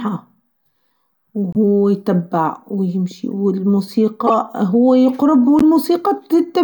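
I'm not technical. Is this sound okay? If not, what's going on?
No. There are three brief glitches in this speech, each a corrupt frame decoded: damaged compressed data that the player played anyway instead of discarding it. They fall at 1.53–1.56 s (just before "يتبع و يمشي و"), 4.27–4.32 s (just before "هو يقرب و") and 5.59–5.62 s (right after "هو يقرب و"). Each lasts a few hundredths of a second and sounds like a sharp chirp or noisy blip. A dropout would leave a gap instead.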